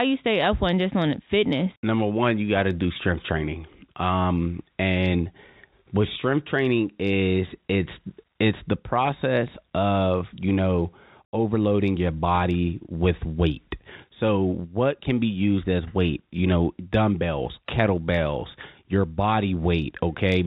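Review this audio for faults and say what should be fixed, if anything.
Nothing stood out on listening to this speech, so there is nothing here that needs fixing.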